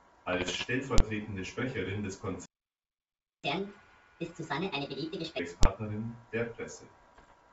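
Right at the start, from 0.33 to 0.65 s, the speech breaks into pops and gritty bursts with little jumps in level. That's bit errors on an ADPCM link, at roughly one percent of bits. Each flipped bit throws off the decoder's step size and predictor, so every hit smears on for a few milliseconds instead of clicking once. The same thing returns near the end, from 7.14 to 7.33 s, in a shorter run.

At 0.98 s and again at 5.63 s there's a single hard bang, each about 21 ms long. These are invalid numbers at full scale. Some calculation produced infinite or invalid values, and the whole block got pinned to the largest possible sample value. The duration fits a 1024-sample block. Because the block is so short, the loud onset and release merge into one violent crack instead of two pops with silence between.

From 2.46 to 3.44 s the sound just drops out for nearly a second, mid-flow, then resumes. 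That's a playback stall. The output goes dead, most likely because the player ran out of buffered data or its thread got blocked, and it only picks up again once it recovers.

Right after, from 3.44 to 5.39 s, you get catch-up at higher speed. The player races through its backlog at 1.5 times normal speed, resampling as it goes. Pitch jumps roughly seven semitones, so the speech sounds hurried and chipmunky, then snaps back down to normal. Underneath all this, the G.722 wideband coding at 64 kbit/s adds at most a faint upper-band hiss.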